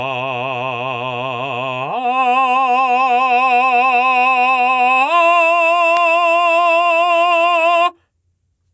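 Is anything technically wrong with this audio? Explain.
Yes. Gain pumping runs through the whole music clip. The gain swings by around 10 dB, pulling down under every loud hit and leaving the music squashed. The likely cause is gain set far too high, with a fast limiter clamping down on each peak. On a waveform, the envelope looks flattened and the quiet floor rises between peaks. The call's microphone processing, with nothing above 8 kHz, is heard as expected.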